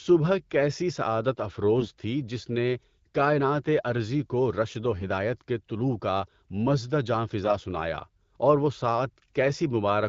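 From 1.78 to 1.87 s, AMR bit errors corrupt the wideband speech stream. Around one bit in twenty of the weakly protected part of each frame arrived flipped, but the checksum on the core bits still passed, so the decoder used the damaged data. Its excitation pulses landed in wrong positions and its fine pitch, gain and spectral values were wrong. For about 90 ms, which fits four 20 ms frames, the voice keeps roughly its pitch and level but turns hoarse, scratchy and gargly.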